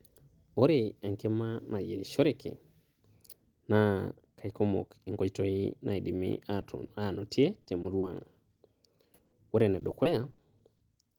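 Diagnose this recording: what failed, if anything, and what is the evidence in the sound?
Short concealed packet loss on the network path: brief smears or wobbles at 6.61, 6.88–6.90, 7.61–7.66, 7.82–7.85, 7.99–8.04 and 9.14–9.19 s, where the decoder extends the previous sound over 10–40 ms holes rather than leaving hard dropouts.

Burst of packet loss at 9.25–9.33 s: about 70 ms is lost in one run, so the continued sound fades into a held buzz or hiss before the audio resumes with that stretch missing. It is longer than a single concealed gap.

Repeated packet loss (robotic sound) from 9.79 to 10.81 s: eight gaps of up to 50 ms, about 16% of the span, patched in quick succession. Unlike isolated losses, the repetition gives choppy sound.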